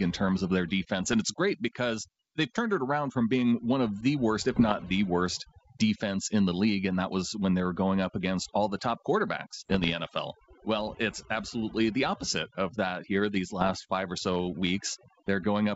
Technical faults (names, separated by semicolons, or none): overdone noise removal; bit errors on an ADPCM link